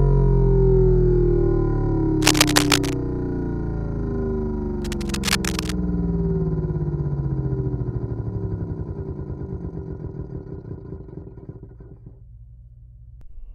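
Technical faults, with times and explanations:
2.22–2.95 s and 4.82–5.76 s, cable scratch noise: dense, uneven rustly scratching, first about as loud as the sound, then a bit quieter, likely a worn cable or connector shifting contact.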